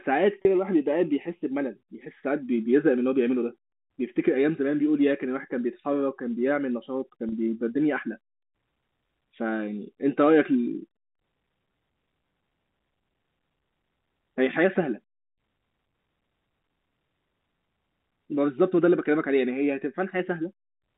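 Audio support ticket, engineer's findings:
Packet loss with pitch repetition at 0.42, 3.69 and 7.29 s, each about 30 ms, one lost packet bridged by concealment: brief held buzz, not a silent dropout or click, over G.711 narrowband audio.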